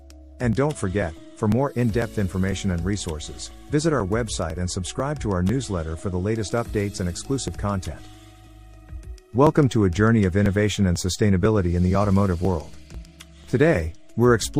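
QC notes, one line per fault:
0.53–14.44 s, periodic USB or driver dropouts: ticks recur about every 0.50 s, roughly thirty across the span, and are audible only while signal is present. Each time a few milliseconds of audio are skipped rather than silenced, so the waveform jumps abruptly and leaves a click. The waveform shows a step discontinuity at each tick, and a spectrogram shows evenly spaced thin vertical broadband lines. The regularity points to the audio driver or USB bus being blocked on a fixed schedule.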